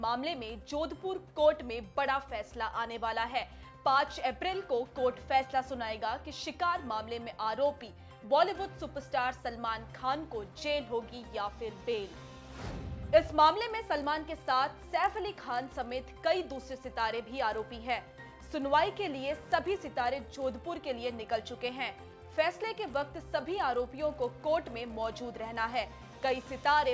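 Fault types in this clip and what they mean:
resampler restarted on every block: from 13.48 s on, each 20 ms block is resampled alone, so its edge errors make a 50 Hz buzz riding the sound.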